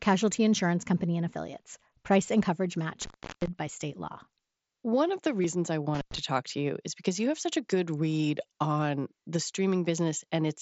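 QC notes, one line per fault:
3.02–3.48 s and 5.94–6.18 s, intermittent contact: a loose cable or plug connection briefly breaks. The first break falls between "and coverage" and "by state law", with the line open for about 0.35 s. The second ends just before "talk to you is" and is open for about 0.1 s. Each time the signal path is simply disconnected, so the audio drops out with a crackle at each edge as the contact scrapes open and shut. Only faint hiss remains in the gap.
5.42–5.44 s, concealed Bluetooth headset packet loss: just after "of the", voice packets between headset and phone fail to arrive for about 22 ms, which fits roughly three lost mSBC frames. The receiver fills the hole by repeating the closest-matching piece of the preceding waveform, but across a run of lost frames this leaves a very brief buzzy tone held at full level and a slight warble as the real audio resumes. 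The surrounding mSBC speech band extends up to 8 kHz.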